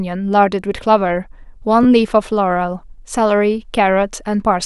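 A speech clip with a repeated buffer from 1.83 to 1.86 s. An 11.6 ms slice, which fits a 512-sample buffer, plays two extra times with hard joins. Unlike a dropout, there's no silent gap and essentially nothing goes missing.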